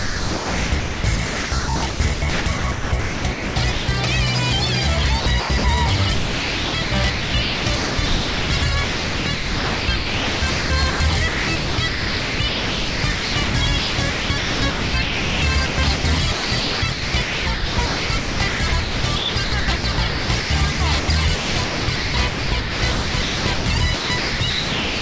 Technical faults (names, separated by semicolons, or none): sound chopped by the voice detector